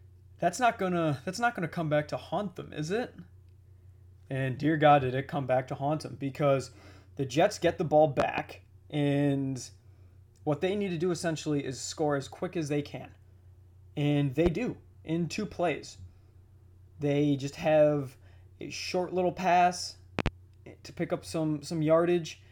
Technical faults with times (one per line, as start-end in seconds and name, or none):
8.20-8.41 loud pop
14.46-14.49 loud pop
20.19-20.29 loud pop